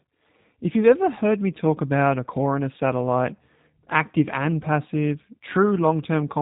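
G.729 codec damage runs through the whole of this speech clip, from start to end. The speech has been rebuilt by a low-rate model: a vocal tract filter and pitch predictor shape a handful of pulses in each short frame, which gives the plainly audible rough, slightly synthetic texture and points to the G.729A variant at around 8 kbit/s. Nothing is heard above 3.8 kHz, so sibilants sound dull.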